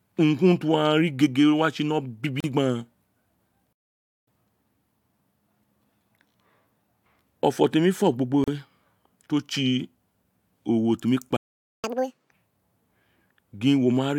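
A speech clip with three kinds of fault. Short silences from a gap at a join of encoded pieces open at 2.40 s and 8.44 s, each about 36 to 37 ms, six seconds apart. Separately encoded pieces were joined with their start delay and end padding left in. Two playback stalls cut the sound mid-flow. The first runs from 3.73 to 4.28 s, about 544 ms. The second runs from 11.36 to 11.84 s, about 471 ms, right after "owe temi kpa". The player likely ran out of data. Each stall is followed by catch-up at higher speed. From 4.28 to 7.28 s, around "owa temi fo gbo", playback runs at 1.1 times speed, with pitch up about a semitone and a half. From 11.84 to 12.31 s it runs at twice speed, with pitch up roughly ten semitones, before dropping back to normal.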